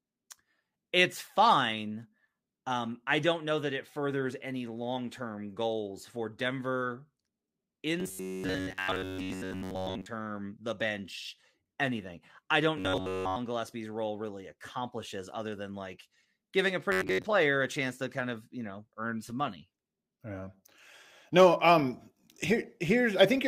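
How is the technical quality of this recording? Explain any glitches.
The speech has one recurring fault, robotic sound from repeated short buffers, at 8.00–10.07 s, 12.77–13.36 s and 16.92–17.23 s. Each time the sound becomes a rigid, metallic buzz at a fixed 93.8 Hz, which fits a chunk of about 10.7 ms being looped. This is likely caused by audio arriving too seldom, so the last chunk repeats while new sound is skipped. About 70% of the sound is replaced in the first and third stretches, and nearly all of it in the second. Unlike a dropout, there is no silence, and the buzz pitch stays fixed instead of following the voice.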